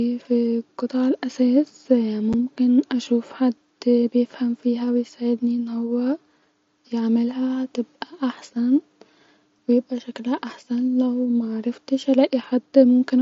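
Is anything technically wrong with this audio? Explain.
Yes. At 2.33 s, between "في قطع الاساس" and "اشوف حد بيفهم فيها", there is one unconcealed Bluetooth headset packet loss. A single headset voice packet never arrived. Nothing filled the gap. The speech drops out for about 7.5 ms, with abrupt edges. The audio passes through an mSBC headset link, with light grain on louder sounds.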